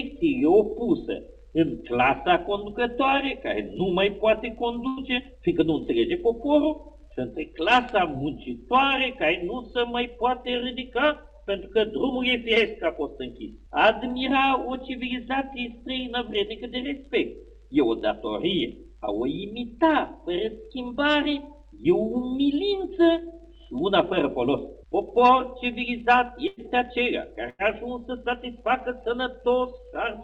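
There are three bursts of packet loss, at 4.87 s, 26.47 s and 27.50 s. In each, the receiver stretched the last bit of sound for about 95 ms as it faded out, then skipped ahead past about 60 ms of missing audio. Right after the first and second bursts you get a jitter buffer speed-up, from 5.04 to 5.62 s at 106% and from 26.61 to 28.14 s at 104%. The receiver trimmed pitch periods to drain the extra backlog, so the audio runs faster at the same pitch, the first one a touch hurried.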